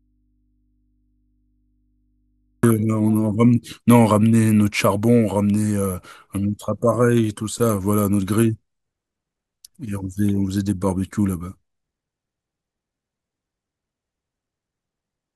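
The signal path has likely lost its source while the input after the break stays live, so the clip opens already in an audio dropout to a faint residue. From the start until 2.63 s the speech is missing, and the gap carries only mains hum picked up by the open input, roughly 45 dB below the normal speech level. At 2.63 s the speech returns abruptly, with none of the gradual rise of a fade-in or a natural pause.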